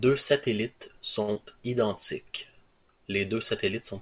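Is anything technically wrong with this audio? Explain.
Yes, two brief network faults sit close together in this speech, carried over a call path whose sound stops at 4 kHz.

A short stall from a late packet runs from 1.22 to 1.30 s. A packet arrived late and the jitter buffer ran dry, so the receiver stretched the last sound for about 57 ms, then resumed exactly where it paused. Nothing is lost, but the sound is held slightly too long, with a faint buzz or dip.

A short concealed packet loss follows at 1.34 to 1.37 s. About 20 ms of audio never reached the decoder in time, and the receiver bridged the gap by continuing the preceding sound before blending back. The result is a quick smear or wobble, and a short consonant can drop out.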